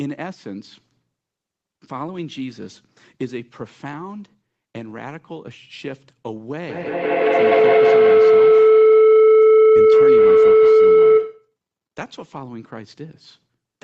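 It's a speech recording, and from 6.69 to 11.57 s a feedback howl takes over: a tone around 400 Hz climbs to about 17 dB above the speech and repeats roughly every 150 ms, the sound of a mic-to-speaker loop gaining level each pass. The audio tops out at 8 kHz, as the call codec's band limit.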